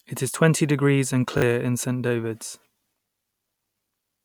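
Speech, with two repeated-buffer stutters. At 1.38 to 1.42 s, right after "is twenty degrees and", one short slice plays three times in a row with hard joins, which fits a 20 ms buffer being replayed twice when fresh audio didn't arrive in time. That swallows roughly 40 ms. At 3.10 to 3.12 s the same thing happens once, a single extra play, and roughly 20 ms goes missing.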